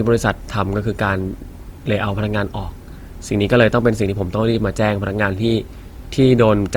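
Throughout the speech there is generation loss, most likely from about three passes through a lossy codec, which fits repeated Opus encodes at around 48 kbit/s. Each pass requantises on a shifted frame grid, so swirl and hollowness build beyond what one encode would give, and consonant attacks smear, even with content extending to about 20.2 kHz.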